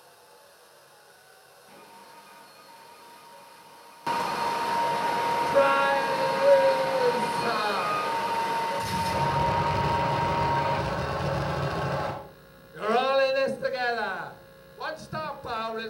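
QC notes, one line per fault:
0.00–4.07 s, one channel inverted: the sound drops by about 21 dB for this opening stretch and then returns to its normal level, with the background falling away along with everything else. The likely cause is one stereo channel carrying reversed polarity, so when the pair was folded down to mono the content common to both channels cancelled, leaving only the small difference between them as the residue heard here.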